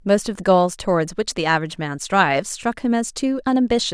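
No technical faults are audible anywhere in it.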